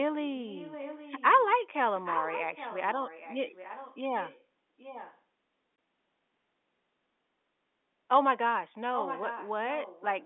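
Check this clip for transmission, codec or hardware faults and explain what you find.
Two things stand out: an echo leak running through much of the clip, and one short hole from packet loss filled with silence.

The echo leak shows up at 0.48–1.58, 1.97–3.98, 4.20–4.43, 4.78–5.20, 8.94–9.52 and 9.71–10.25 s. A faint copy of the speech trails 820 ms behind, roughly 10 to 20 dB down, loudest around 2–4 s and near 9 s. Likely the far end is on a loudspeaker and its echo canceller isn't catching everything its mic hears, so that spill gets sent back.

The packet loss filled with silence falls at 5.76–5.78 s. The speech drops out for 20 ms with hard edges, which fits a single lost packet the receiver simply replaced with nothing. Through all of this the telephone-band G.711 character of the line can be heard.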